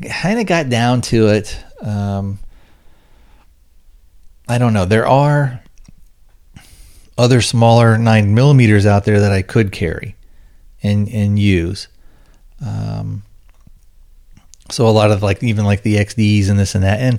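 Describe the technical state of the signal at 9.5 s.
At 9.5 s the speech signal is intact, with no dropout, distortion, glitch or other fault to be heard at that point.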